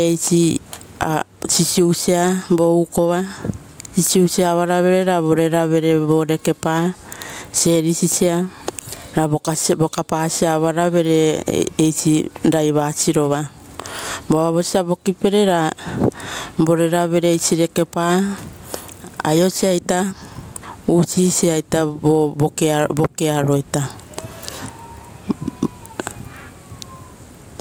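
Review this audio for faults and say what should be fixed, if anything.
Gain pumping runs right through this speech clip, with the gain swinging something like 20 dB. The room noise sits about 45 dB below the speech. The level stays oddly flat and squashed. It's most likely the mic gain cranked way too high with a fast limiter or compressor clamping it on every loud bit. To prevent it, set the input gain properly and ease off that fast limiting.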